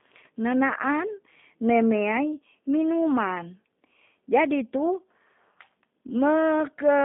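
Throughout, the speech has been carried by a G.729 codec at what sounds like 8 kbit/s, rebuilt from a vocal tract model and a few pulses per frame. Nothing passes above 3.7 kHz or below 200 Hz, leaving the voice thin and plainly rough and synthetic.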